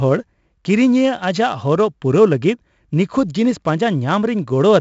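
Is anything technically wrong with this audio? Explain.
Yes. Heavy 4-bit ADPCM compression runs throughout the speech. Coarse adaptive prediction steps leave gritty, level-following hiss and roughened attacks. Nothing sounds above 7.7 kHz, which fits a 64 kbps stream.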